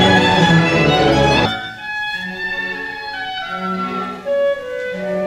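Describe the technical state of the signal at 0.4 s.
At 0.4 s the signal is intact, with no dropout, distortion or other fault audible at that point.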